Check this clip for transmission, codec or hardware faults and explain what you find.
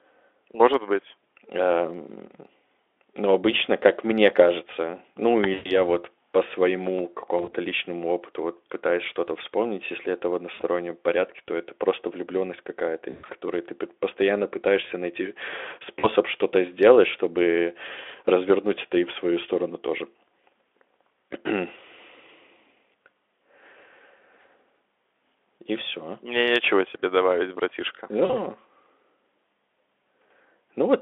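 One kind of fault is present: VoIP packet loss concealed by the speech codec, heard six times: 5.53–5.78 s (after "как мне кажется ну", before "вот по своему"), 7.38–7.54 s (before "личному опыту вот пытаюсь"), 10.53–10.63 s, 13.09–13.34 s (before "ты постоянно пытаешься найти"), 16.00–16.08 s and 28.25–28.35 s. Missing audio runs from 40 ms to 160 ms, consistent with 20 ms frames. At 7.38 s the gaps are scattered over 160 ms. At 13.09 s they are spread over 200 ms, with an 80 ms run. The decoder repeats its last pitch and filter at falling gain, so the speech smears into a buzzy tone or coloured noise that fades and stays weak briefly after packets resume. On a spectrogram this appears as flat, stretched harmonics that fade out. On the waveform the envelope dips.

All of this sits on the Speex codec's narrow 300–3500 Hz line band.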